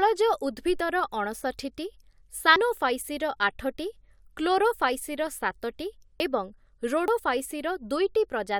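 The speech was likely hit by a dropped buffer (overrun): audio went uncollected before being overwritten, so the survivors are spliced directly. At 2.56 s roughly a tenth of a second vanishes with a jump; shorter skips follow at 6.2 and 7.08 s.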